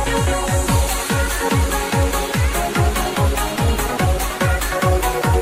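Nothing technically wrong can be heard in the audio. No dropouts, distortion or other faults turn up at any point.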